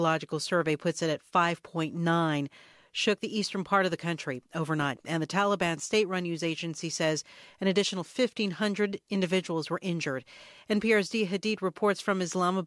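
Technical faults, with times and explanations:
No technical faults are present in this speech recording.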